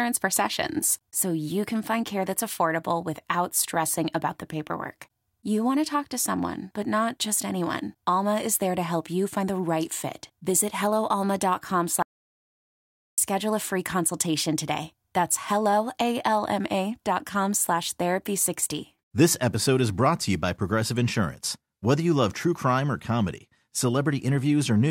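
At 12.02 s the speech cuts to dead silence, with no room tone at all, and comes back at 13.18 s on "a free consultation today", so 1.16 s is gone. That's an audio dropout to silence, likely a briefly lost input while the recorder kept writing silence.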